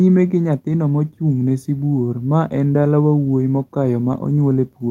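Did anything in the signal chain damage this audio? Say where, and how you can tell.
No, nothing in the signal chain damaged this audio.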